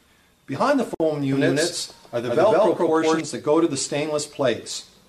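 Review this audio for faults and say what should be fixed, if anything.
A gap at a join of encoded pieces opens from 0.95 to 1.00 s, about 55 ms long. The pieces were encoded separately and joined untrimmed. Encoder start delay and last-frame padding stay in. The sound resumes where it stopped. Trim each piece's delay and padding before joining, or encode in one pass.

A doubled audio track runs from 1.33 to 3.21 s. A full-band copy trails by roughly 150 ms, at about the same level. It has no decay or room colour. It starts and stops abruptly. The likely cause is a second, slower capture path or an edit holding two out-of-step copies. Use a single capture path and check edits for overlapping copies.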